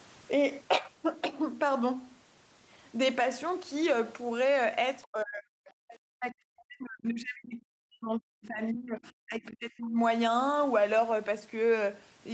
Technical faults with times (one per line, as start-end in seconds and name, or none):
5.03-5.58 speech suppressed in double talk
5.65-5.96 other side's voice leaking through
6.16-9.99 speech suppressed in double talk